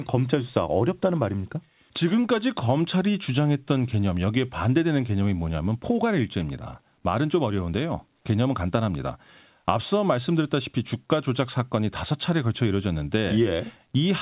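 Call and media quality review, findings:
Nothing to flag on this one; the speech came over a G.711 A-law call at 64 kbps, so it's narrowband with nothing above 4 kHz, which is just what that codec gives you.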